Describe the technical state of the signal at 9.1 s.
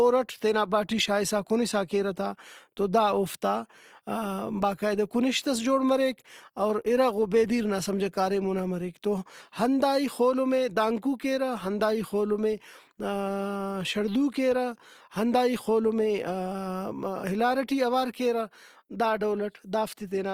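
At 9.1 s, likely Opus compression across the whole clip, fitting about 24 kbps, fills starved bands with folded spectrum or noise, leaving the speech grainy and rough.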